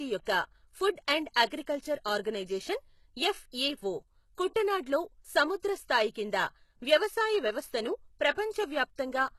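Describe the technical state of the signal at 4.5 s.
At 4.54 s there is a pre-echo lasting about 15 ms. A brief hiss runs ahead of a sharp attack. Quantisation noise spread across a transform block leaks into the quiet moment before it, softening the onset.

Throughout, including this moment, the speech has plainly audible codec damage, likely from HE-AAC compression at a low bitrate near 16 kbps. The treble is rebuilt rather than coded and stops at 12.3 kHz. S sounds come out gritty and metallic.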